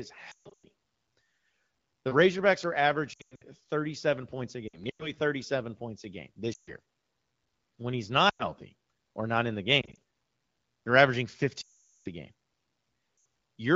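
Speech over an AMR-WB (HD Voice) link shows lost AMR speech frames: corrupted frames fail their checks, so the decoder stretches the last good frame at falling level. The result is smeared, fading dropouts at 0.31–0.65, 3.13–3.42, 4.67–5.12 s (after "points a"), 6.53–6.74, 8.29–8.45, 9.81–9.96 s (after "or not in the"), 11.61–12.08 s (the longest, between "they're averaging" and "a game"), and 13.17–13.25 s, within otherwise lightly coded wideband audio that points to a rate near 16 kbit/s.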